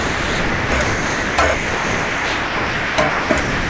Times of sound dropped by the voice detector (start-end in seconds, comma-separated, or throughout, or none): 0.00-3.69